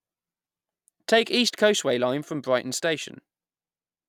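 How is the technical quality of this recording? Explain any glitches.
The technical quality is sound, with no glitches to explain.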